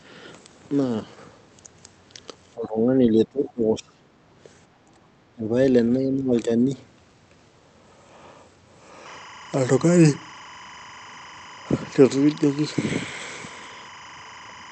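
From 2.55 to 4.17 s the speech dips hard. The deepest drop is roughly 25 dB, and about one and a half seconds of it is affected. This is speech suppressed in double talk. The likely cause is an echo canceller that heard both sides at once. It could not tell its own talker from the loudspeaker echo, so it turned everything down. Shorter dips follow at 4.85 to 4.99 s, 5.34 to 5.57 s and 5.98 to 6.70 s. They are about 25, 20 and 15 dB deep.

Inside the first dip, from 3.46 to 3.53 s, a faint second voice slips through. It sits about 30 dB below the talker and lasts only a scrap of time. This is the other side's voice leaking through. The far end was likely playing on a loudspeaker, and the echo canceller did not remove all of it from the microphone.

From 9.06 s to the end, a steady chirping warble runs behind the speech. It flips between two tones near 1 kHz and 2 kHz, about 20 dB below the signal. 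The pattern repeats at 25 frames per second. This is timecode bleed. Linear timecode from a nearby track or cable has leaked into the audio. Its square wave is heard directly as that two-pitch chatter.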